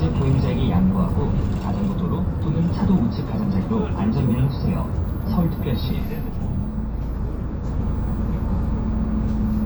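No technical faults can be heard anywhere in the audio.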